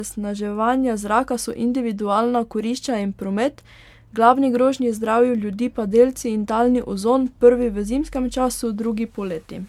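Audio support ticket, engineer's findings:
Generation loss, throughout. Likely repeated lossy re-encoding, around seven passes, consistent with an MP3 chain near 128 kbit/s. Each pass requantises on a shifted frame grid, stacking noise and spectral holes. Speech sounds swirly, hollow and smeared beyond that bitrate, with blurred consonant attacks.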